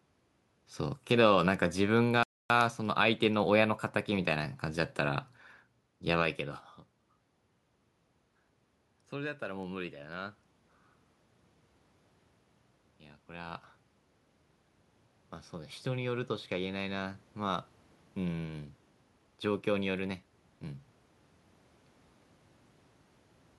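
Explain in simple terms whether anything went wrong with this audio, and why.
Three things went wrong.

A bit error spike happens when a single stored digit flips in the digital data. The sample value jumps and snaps back, causing sharp, isolated ticks at 1.54, 2.61 and 9.63 seconds.

A playback stall is when the player likely ran short of data or was held up, so the sound cuts out mid-flow from 2.23 to 2.50 seconds, about a quarter of a second of silence.

Automatic gain rising means the level control judged the input too quiet and turned it up gradually. Between 15.5 and 17.75 seconds the voice and the background swell louder together.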